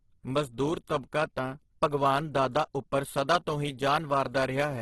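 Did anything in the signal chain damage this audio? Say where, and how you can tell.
Yes, at the codec stage, and the damage runs through the whole clip. The speech has a rough, grainy texture, with harmonics turned noisy rather than swirling, and nothing reaches above 12.2 kHz. That pattern is likely Opus compression in its music-oriented CELT mode, under heavy bit starvation at a rate around 12 kbps. The encoder preserves each band's energy but fills starved bands with folded or noise-like content, smearing tonal detail into grit.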